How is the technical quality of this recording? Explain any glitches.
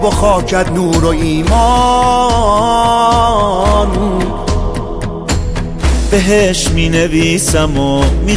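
Nothing in the recording stood out as a problem on listening, so there are no glitches to explain.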